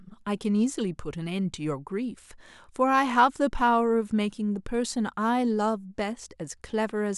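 A recording of speech, with no technical fault to be heard anywhere in it. Nothing in the signal calls for a time or a cause to be noted.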